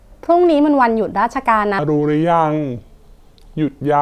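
From 1.79 s to the end, the speech drops into a wrong sample rate fault. The samples are played back slower than they were captured, with no conversion between the two rates. Speed and pitch fall together. The speech runs at about 0.73 times its proper pace and sits about 5.5 semitones lower. It sounds low, heavy and dragged out. The ratio fits audio recorded at 44.1 kHz but played at 32 kHz.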